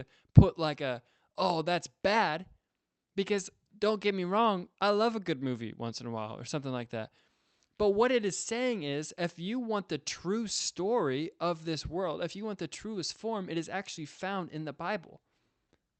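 Speech, with no technical faults to report.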